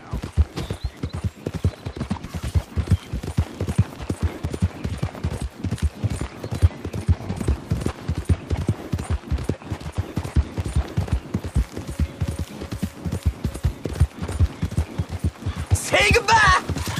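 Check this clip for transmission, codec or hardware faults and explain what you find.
One fault stands out: clock drift buffer slips. Two devices likely run on mismatched clocks, off by several hundred ppm, so a buffer drops or repeats around 70 samples every 2.05 s. About ten regular clicks result, from 0.34 to 16.78 s.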